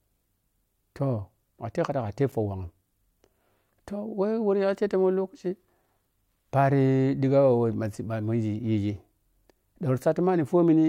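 A block of digital silence at 2.32 s in this speech recording drops the signal to silence for about 9 ms with no fade, so both hard edges fuse into a single tick.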